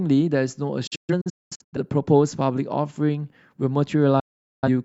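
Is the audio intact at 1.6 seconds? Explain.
No. At 1.6 s the clip is inside a digital broadcast dropout from 0.87 to 1.78 s: the receiver stopped getting good frames and muted until they returned. The speech drops out in short holes with 8 ms fades, about 0.55 s lost over 0.85 s, the longest gap 0.21 s.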